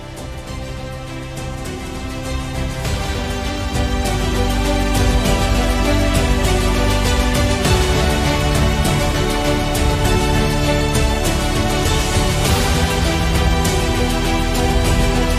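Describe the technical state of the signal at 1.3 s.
A doubled audio track runs at 1.3 s, already under way when the clip begins and ending abruptly at 3.16 s. A second, full-band copy of the same sound trails the original by roughly a fifth of a second, a few decibels quieter, most likely because the signal was captured again through a slower path and mixed back in. The lagging copy carries no decay or room colour, so the sound sounds cleanly doubled rather than reverberant.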